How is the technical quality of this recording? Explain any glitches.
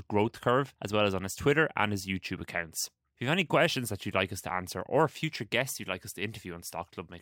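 The recording carries one fault that runs through the whole clip: imaging from linear upsampling. The audio appears to have been raised from a rate near 22 kHz to 44.1 kHz by simply joining neighbouring samples with straight lines. That crude interpolation barely filters anything. It softens the top of the original band and leaves a mirrored copy of the speech spectrum sitting between roughly 11 kHz and 22 kHz, around 25 dB below the main signal. On sibilants this comes through as a faint metallic shimmer. A spectrogram shows the speech energy fading as it approaches 11 kHz, with a dimmer, upside-down reflection of the same harmonic patterns stacked above that line. The waveform shows little at this scale, though close zooming may reveal slightly angular, segment-like stretches between samples.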